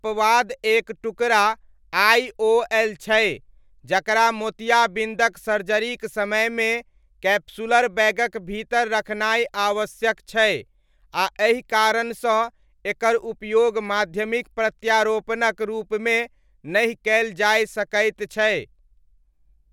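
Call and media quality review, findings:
No faults found in this speech recording. Nothing audible calls for a ticket entry.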